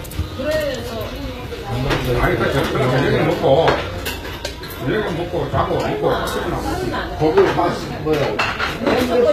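Throughout, the top end sounds synthetic and gritty with nothing above about 14.9 kHz, likely HE-AAC compression at a bitrate near 20 kbps rebuilding treble from copied lower bands.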